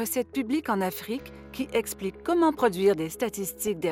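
At 3.67 s there's a brief burst of DAB burbling, where bit errors got past correction and corrupted individual MP2 sub-bands.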